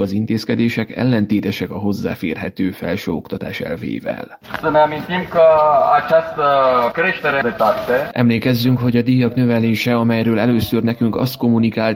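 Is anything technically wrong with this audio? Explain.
Yes. Clock drift between sender and receiver runs throughout: the sending device's clock is ahead of the receiver's by about 4 percent, so audio arrives faster than it is played and the jitter buffer keeps overfilling, leaving the timing subtly unsteady across the whole clip.

Repeated timing corrections follow from this, from 0.04 s to 11.95 s. To keep pace with a sender running at 104 percent, the receiver keeps discarding short slices of audio at uneven intervals, heard as small hiccups and a slightly lurching tempo.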